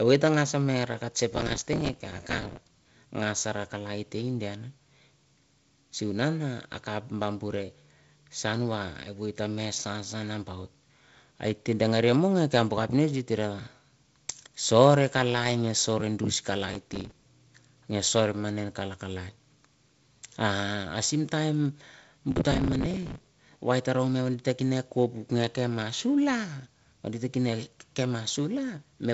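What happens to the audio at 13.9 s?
Nothing goes wrong at 13.9 s: the speech carries on intact through that moment, with only the light wideband telephone coding present throughout, which leaves no content above about 7.7 kHz.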